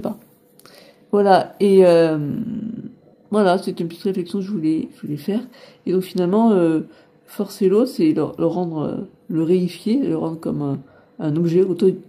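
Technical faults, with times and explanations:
Nothing stood out on listening to the clip.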